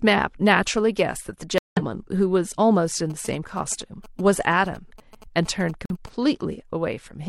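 At 1.58 s the speech drops into abrupt silence until 1.82 s, a corrupt frame muted. The decoder rejected damaged compressed data and substituted a 240 ms hole, which fits several lost frames. From 3.10 s to 6.09 s, GSM signalling bursts from a nearby 2G phone are rectified by the audio circuit into a galloping dit-dit-dit of short 217 Hz buzzes, about 20 dB below the speech. Within that stretch, a second muted frame blanks 5.86 s to 5.97 s.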